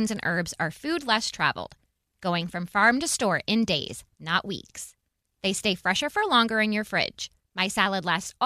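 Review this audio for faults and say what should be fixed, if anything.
Nothing stood out on listening, so there is nothing here that needs fixing.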